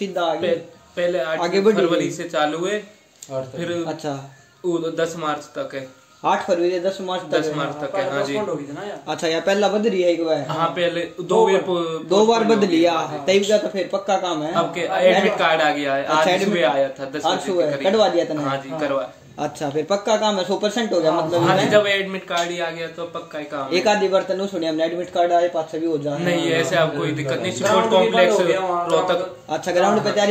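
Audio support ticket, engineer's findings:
Nothing stood out on listening, so there are no findings to log for this ticket.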